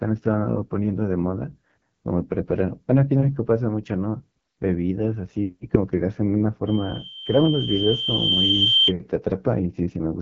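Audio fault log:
throughout: AMR wideband (HD Voice) codec. The speech sounds rough and raspy, which fits a low mode near 8.85 kbit/s. The upper band is coarse, noise-filled texture rather than true detail. On a spectrogram, energy stops at a hard ceiling near 7.6 kHz, with smeared, grainy harmonics below.
6.67 to 8.93 s: loudspeaker feedback squeal. A single 3.1 kHz tone grows over about two seconds, until it sits about 10 dB above the speech, as the mic–speaker loop reinforces that frequency. A spectrogram shows one brightening horizontal line, and the waveform envelope swells steadily.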